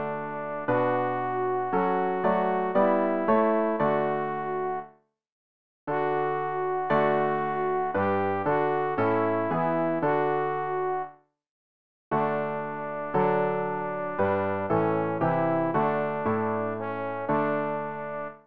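Nothing technically wrong can be heard anywhere in this audio. There is no fault to place in time and no cause to point to.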